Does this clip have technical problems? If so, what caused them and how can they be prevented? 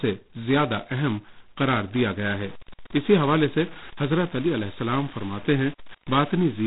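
Yes. Throughout the clip the speech carries a harsh, rasping hiss that rises and falls with its level, and everything above about 3.9 kHz is gone, leaving a dull, telephone-band sound. This is G.726 ADPCM at 16 kbit/s. The codec sends only a couple of bits per sample, describing the difference from its own adaptive prediction, so the coarse steps turn into heavy, signal-following noise. Using 32 kbit/s or a wideband codec would prevent this.

From 2.39 s to the end, a grainy, gritty distortion is layered on top. It changes with the sound, and the quieter sounds turn gritty. The likely cause is low bit depth without dither: the audio was truncated to around 6 bits, so the rounding error tracks the signal and sits only about 25 dB below it. Keeping 16 bits or more, and dithering whenever the word length is reduced, would prevent this.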